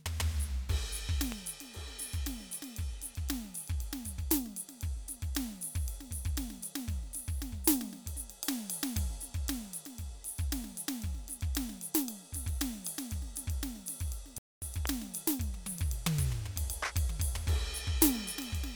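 A sudden voltage step, likely from a switch, plug or driver glitch, was added to the signal at 1.32 s, where a loud pop cuts sharply through the music. It is a single pop, roughly 15 dB above the surrounding level, with the music continuing unbroken beneath it. The same kind of loud pop returns at 14.86 s, again a single pop standing well clear of the mix.

At 14.38 s the player ran out of data, or its output thread was blocked. This is likely a playback stall. The music drops to silence in mid-flow for about 238 ms, until 14.62 s, then resumes. The gap is long enough to hear as a clear hiccup in the music's flow. The second pop follows it by about a quarter of a second.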